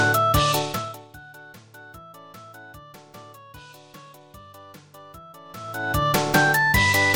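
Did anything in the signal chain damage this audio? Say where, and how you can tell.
Yes. The gain stage in the playback or processing chain applies level changes in 2 dB jumps, around thirty times a second, with no smoothing between them. That produces zipper noise: a fine ticking rides on the sound from 0.58 to 1.11 s, as the level drops by roughly 25 dB, and again from 5.44 to 6.06 s, as it comes back up. Each abrupt step leaves a small click, and the steady rate of those clicks points to gain updated once per buffer.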